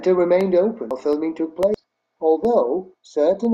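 From 0.41 s to 3.45 s the speech carries an evenly spaced tick every half second, about seven in all. These are periodic USB or driver dropouts: something stalls the audio path at a fixed interval, and each time roughly a millisecond of signal is replaced by silence.

At 0.91 to 1.00 s and again at 1.74 to 1.84 s, the speech lurches forward. These are compressed frames skipped: whole coded frames never reached playback, so around a third of a second and then about a fifth of a second of speech is missing.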